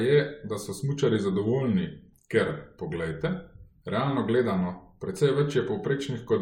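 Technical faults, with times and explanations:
Nothing here calls for a note; I didn't hear a single technical fault anywhere in the speech.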